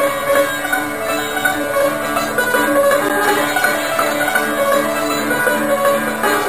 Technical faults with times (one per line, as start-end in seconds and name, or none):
3.09 block of digital silence